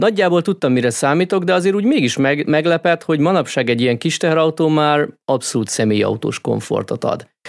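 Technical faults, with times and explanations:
No technical faults found anywhere in the speech recording.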